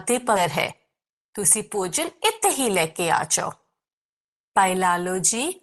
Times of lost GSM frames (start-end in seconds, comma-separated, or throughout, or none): none